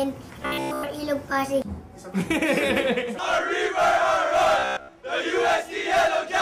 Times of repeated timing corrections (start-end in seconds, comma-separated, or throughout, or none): none